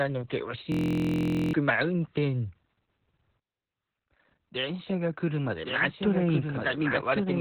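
From the start, the speech has heavy Opus voice compression. Nothing is heard above about 4.3 kHz, so the sound is narrowband and muffled. That points to the SILK speech coder at a very low rate, around 8 kbps. The coder throws away the upper band and codes the remaining signal crudely. The voice comes out hoarse, dull and slightly robotic through the whole clip.

At 0.72 s a system hang loop begins and runs to 1.53 s. The system froze while the audio hardware kept replaying one tiny stretch of sound. Each loop lasts 23.22 ms, which fits a 1024-sample buffer. Repeating at 43.1 Hz, it becomes a steady, low buzz instead of speech. Roughly 0.7 s of the real audio is lost under it.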